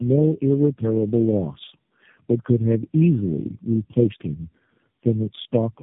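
Across the whole speech clip there is tandem speech coding: the signal was decoded and re-encoded several times, each speech coder working on the previous one's already damaged output. The sound points to around four low-rate coders in a row. Nothing survives above 3.7 kHz, so it is muffled, but the sign of tandem coding is the compounded roughness and watery warble. One narrowband codec alone would sound band-limited yet steadier and cleaner.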